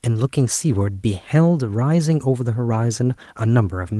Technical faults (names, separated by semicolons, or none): none